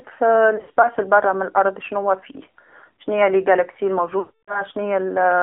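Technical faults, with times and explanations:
Throughout: AMR narrowband mobile codec. The speech is confined to a band of about 250 Hz to 3.5 kHz, with nothing above 4 kHz, and carries the plainly audible buzzy, synthetic edge of a low-rate vocal-tract model, which fits a mode near 7.4 kbps. Unlike a plain telephone band-limit, the damage lies in the voice texture itself: a pulse-driven model rebuilds each 20 ms frame, so breathiness and fine detail come out coarse.
0.56–0.90 s: lost AMR speech frames. About 120 ms of audio is missing, scattered over roughly 280 ms, with no gap longer than 60 ms, just before "البرا من الأرض شناوا". Each short loss makes the decoder repeat the last pitch and vocal-tract settings at lower gain, so the sound dips and warbles briefly instead of dropping out. That concealed stretching, rather than a hard cut or click, distinguishes it from a packet gap filled with silence.
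4.20–4.64 s: lost AMR speech frames. Right after "شناوا فيه شناي المجرات", about 280 ms of frames is lost. The decoder holds the previous settings, so the voice is smeared and drawn out and then fades to silence within roughly the first 0.1 to 0.2 s. When decoding resumes, the speech comes back weak or rough for a moment. This longer fade-out sets it apart from the brief warbles near the start.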